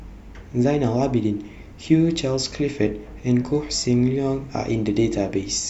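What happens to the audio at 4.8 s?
At 4.8 s the speech continues cleanly, with no dropout, click, distortion or other break in the audio at that point.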